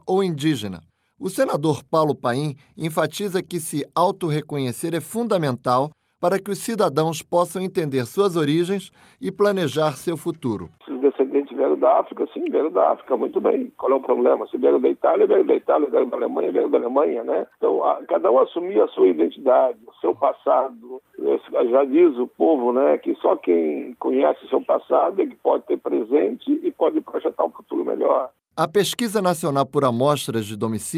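No dropouts, distortion, glitches or other faults are audible anywhere in the recording.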